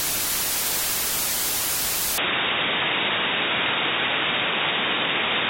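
At 2.18 s the sounds in the clip abruptly lose their top end and stay that way to the end. Nothing is left above about 3.8 kHz, so the material turns dull and boxy, with a new, faint background noise roughly 45 dB down. There is no gap at the change and the level barely shifts. This is likely an input switched to a poorer device mid-recording, with a narrower-band microphone taking over.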